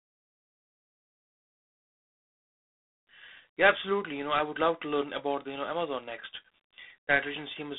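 A harsh, rasping hiss rides on the speech from start to finish, swelling on louder syllables and easing as the level drops, while everything above about 3.8 kHz is gone and the sound sits in a narrow band from roughly 200 Hz to 3.6 kHz. This is G.726 ADPCM coding at a reduced bit depth, which fits 24 kbit/s: each sample carries only a few bits describing its difference from a predicted value, so the coarse steps show up as level-tracking noise.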